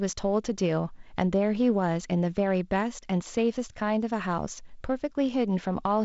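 No technical faults can be heard in this speech, which comes through G.722 wideband telephone coding with nothing above 7.7 kHz.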